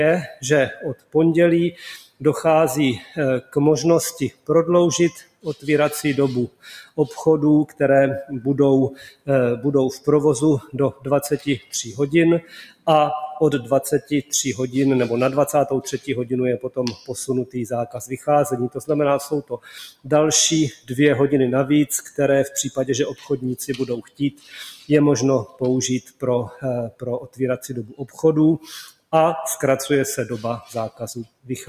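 Across the whole clip the level breathes and pumps: sustained parts and decaying tails keep sinking while sharp onsets jump back up, with a swing of around 15 dB. This is a noise suppressor applied to music or sounds. A processor built for speech is treating steady tones, ambience and reverb as background noise and pulling them down, so the texture thins and flutters instead of holding steady.

The deepest dips are sound cut by the noise suppressor, in six stretches: 0.27 to 7.8 s, 8.92 to 14.32 s, 15.97 to 20.92 s, a brief one at 22.03 to 22.19 s, 23.14 to 29.13 s, and 30.61 s to the end. Within each, held or fading material drops by up to about 19 to 20 dB (about 13 dB in the short 22 s dip), and decays are chopped short. Only part of each stretch is affected, from a few seconds in the longer spans down to a fraction of a second. The suppressor judged those passages to be noise and attenuated them harder than their surroundings.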